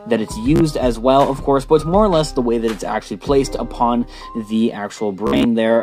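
At 0.56 s and again from 5.27 to 5.44 s, Bluetooth stutter loops a short slice of its last buffer while packets are lost, buzzing for about 44 ms, then about 130 ms (longest run 58 ms). Unlike a silent dropout, the gap repeats sound, then skips ahead.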